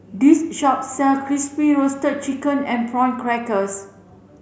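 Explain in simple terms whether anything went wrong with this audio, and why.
Nothing went wrong here; I listened to the whole speech recording and didn't hear a single glitch, dropout or hiccup anywhere.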